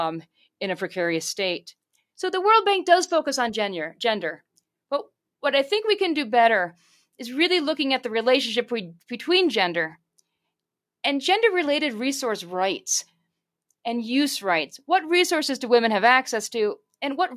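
No technical faults can be heard anywhere in this speech recording.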